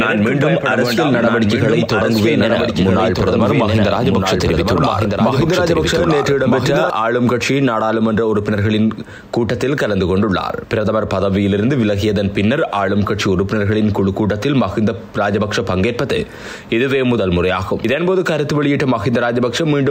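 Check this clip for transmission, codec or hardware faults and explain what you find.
There's one fault here: a doubled audio track that's already running when the clip opens and continues until it cuts off abruptly at 6.90 s. A second full-band copy of the sound trails the original by about a second and a half, sitting roughly 5 dB quieter. It has no decay or room colour, so it sounds like a flat repeat rather than an echo. That's likely the same signal being captured twice, once through a slower path, or an edit that left two copies out of step.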